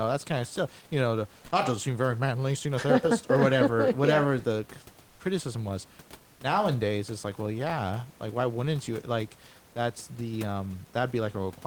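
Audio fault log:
5.09–5.19 s, comfort noise in place of the background: between "whatever yeah the" and "criticism was nowadays it's", 100 ms of the room background, about 31 dB below the loud parts, turns into a flat, textureless hiss about 3 dB quieter, likely filled in during discontinuous transmission.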